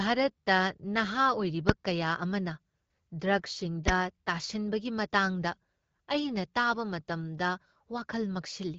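At 1.69 s and again at 3.88 s a single loud bang cuts through the speech. Each is invalid numbers at full scale, where a calculation yielded infinite or invalid values that were pinned to maximum level. The first lasts 1.45 ms, fitting a 64-sample block. The second lasts 5.8 ms, fitting a 256-sample block. On a waveform each appears as a flat slab stuck at one extreme value, far beyond the speech peaks, and on a spectrogram as a thin vertical stripe spanning all frequencies. The audio passes through the AMR wideband (HD Voice) codec at 12.65 kbit/s, and its 7 kHz band edge leaves the spectrogram empty above that line.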